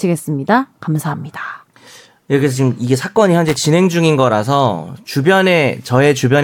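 Loose connector crackle runs from 3.48 to 3.56 s in this speech clip, a short irregular burst of scratchy crackle lasting about 80 ms. A worn or dirty contact somewhere in the cable or plug was briefly disturbed, so the connection opened and closed many times in quick succession. Each break chopped the signal, giving the rough, crackling texture.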